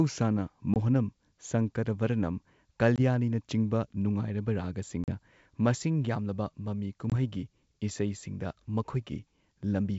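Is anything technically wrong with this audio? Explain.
Yes. Packet loss on an ADPCM call produces four short dropouts in the speech, at 0.74–0.77 s, 2.96–3.00 s, 5.04–5.18 s and 7.10–7.14 s. Each lasts about 20 ms except the third, which is about 40 ms, consistent with one or two lost packets. The missing audio is replaced by silence, so each gap has hard edges. The receiver's adaptive predictor and step size then no longer match the sender's, and the speech returns with a click, a wrong level or brief distortion before it settles.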